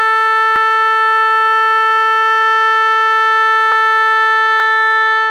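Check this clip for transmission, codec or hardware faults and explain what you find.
The music skips forward at 0.56 s, 3.72 s and 4.6 s, likely a dropped buffer (overrun). Samples were overwritten before being read, so roughly 10, 30 and 20 ms vanish and the edges butt together. Unlike an underrun, no silent gap is heard.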